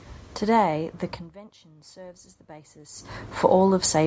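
From 0.74 s to 3.82 s there is automatic gain rising. The input fell by about 22 dB, and the gain control slowly added about 6 dB, so speech and room noise swell together. The waveform envelope and noise floor lift in step, and a spectrogram brightens evenly.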